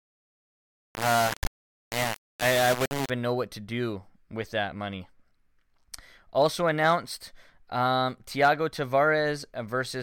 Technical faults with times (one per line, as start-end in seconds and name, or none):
0.00-3.10 low bit depth without dither